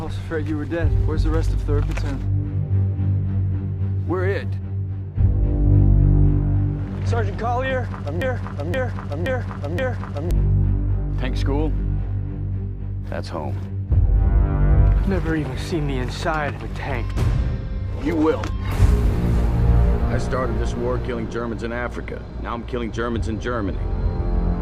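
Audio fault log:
8.22 to 10.31 s, broken-record loop: a chunk of about 0.52 s plays four times back to back, identical each pass, so you get that stuck, stuttering hiccup for roughly two seconds before things move on. What you'd normally hear in that stretch just never arrives. Most likely the player or stream stalled and kept pushing out the last fragment it had in its buffer until fresh audio showed up again.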